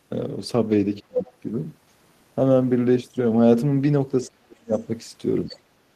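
A speech clip with two kinds of echo-canceller trouble. Speech suppressed in double talk: the voice sinks from 1.02 to 1.22 s, by about 35 dB, and from 4.28 to 4.75 s, by about 40 dB. A milder dip of about 10 dB hits at 5.50 to 5.58 s. The likely cause is the canceller turning everything down while both sides spoke. The other side's voice leaking through: brief scraps of a second voice appear at 1.25 to 1.31 s, about 30 dB below the speech, and at 5.49 to 5.58 s, about 20 dB below. This is likely loudspeaker echo that the canceller failed to remove.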